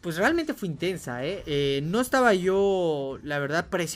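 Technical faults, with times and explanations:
Nothing technical stands out here; the audio comes across without any audible glitches or problems.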